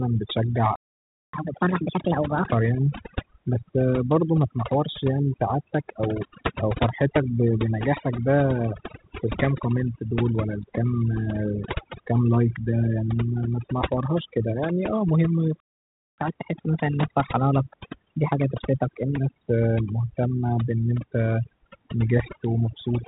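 Overdone noise removal runs throughout. Strong noise reduction has carved away quiet bands, leaving the voice over near-silence with twinkling specks, all within a band stopping near 3.8 kHz. At 0.76 s a playback stall silences the speech for 0.58 s, likely because the player ran out of data. From 1.33 to 2.49 s, catch-up at higher speed plays the backlog at 1.5 times normal, lifting pitch roughly seven semitones. A second stall at 15.60 s cuts out for another 0.58 s, again likely a data underrun. Catch-up follows from 16.18 to 19.18 s at 1.15 times speed, raising pitch about two semitones before settling.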